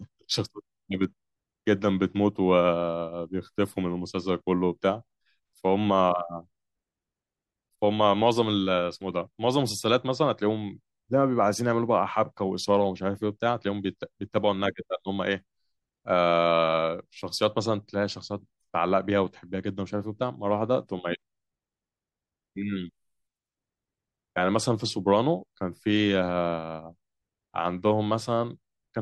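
No technical faults can be heard anywhere in the recording.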